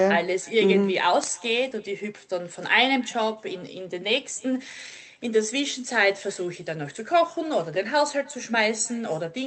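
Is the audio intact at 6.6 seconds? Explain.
No. Echo with no canceller runs through the whole clip, including 6.6 s: the far end's microphone picks up its loudspeaker and sends the speech back about a third of a second later, a faint, thin shadow about 28 dB below the direct speech.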